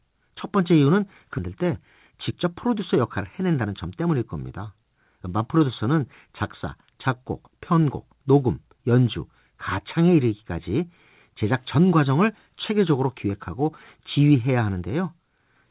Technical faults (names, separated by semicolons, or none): skip ahead; jitter buffer speed-up